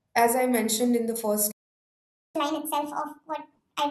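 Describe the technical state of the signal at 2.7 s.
At 2.7 s the speech is in a catch-up at higher speed, running from 2.36 s to 3.90 s. After a stall, the player resamples its backlog to win back lost time. Playback runs 1.5 times fast. Pitch rises by roughly seven semitones, giving a hurried, chipmunk-like sound.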